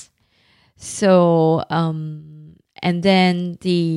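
No faults can be heard anywhere in this recording.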